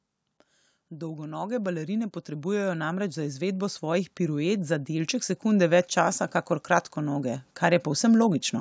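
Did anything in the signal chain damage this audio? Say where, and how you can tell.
Yes, at the call-processing stage, where automatic gain rising occurs twice. From 0.89 s to 5.94 s the level climbs steadily by about 12 dB, and from 6.94 s to 8.5 s it rises again by about 3 dB. Voice and background swell together, which shows a gain stage is at work rather than a change in the talker. The AGC judged the input too quiet and ramped its gain up gradually. The audio stops at 8 kHz, as the call path allows.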